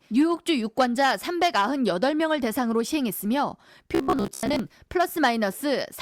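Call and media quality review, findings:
Robotic sound from repeated short buffers, 3.95 to 4.59 s. Speech becomes a rigid metallic buzz at 66.8 Hz, following the words loosely. Likely buffer starvation on playback: the last 15 ms replayed in a loop, most real audio skipped.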